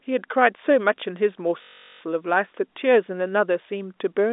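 At 1.62 s the speech locks into a system hang loop that runs until about 2.01 s. The computer or driver stalls, and the hardware keeps replaying the same 21.33 ms slice of its ring buffer, which fits a 512-sample buffer. That slice repeats 18 times, so you hear a steady buzz at about 46.9 Hz instead of a stutter. Once it releases, the sound picks up with essentially nothing skipped. All of it sits inside the narrow telephone band of the G.711 line.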